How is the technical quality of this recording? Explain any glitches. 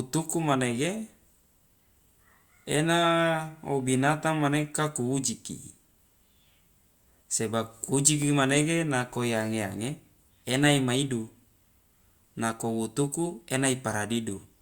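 The recording has no technical glitches; the signal stays intact and continuous throughout the speech.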